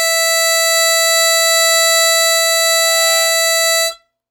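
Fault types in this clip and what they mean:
No audible faults in this music clip; nothing to log.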